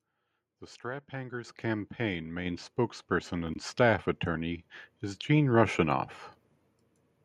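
At 1.44 s the speech and its background jump about 8 dB louder together, then about 4 dB more at 2.46 s: microphone volume stepped up by the call software.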